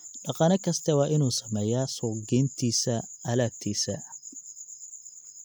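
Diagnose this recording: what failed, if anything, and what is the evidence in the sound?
Nothing in the chain seems to have failed here, since the speech reaches the end without any glitch, dropout or distortion to point at.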